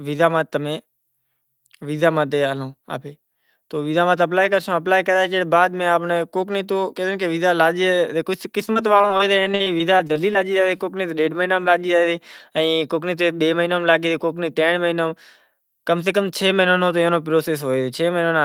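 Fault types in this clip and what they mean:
Repeated packet loss (robotic sound): From 8.65 to 10.37 s the speech turns choppy, with a rapid run of short holes, none longer than about 40 ms. Parts of the speech drop out, and other holes are bridged by stretching the preceding sound. The cause is packets lost or arriving late again and again, each gap papered over by repeating recent audio before the next loss follows.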